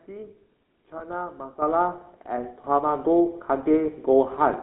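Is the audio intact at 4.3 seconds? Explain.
No, at 4.3 s you're still hearing the GSM full-rate codec, which runs through the whole clip. It rebuilds the speech from a vocal-tract model fed by sparse pulses, so the voice comes out buzzy and gravelly, and nothing survives outside roughly 200 Hz to 3.7 kHz.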